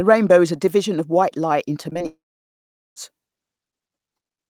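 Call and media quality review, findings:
Short concealed packet loss at 1.89, 1.93 and 1.99 s. Brief smears or wobble. Jitter buffer/decoder concealment extended about 20 ms gaps from preceding sound.

Long network dropout, 2.06 to 2.98 s. Fading buzz or hiss, then about 0.78 s silence; 0.9 s lost. Likely transport outage, receiver concealment exhausted.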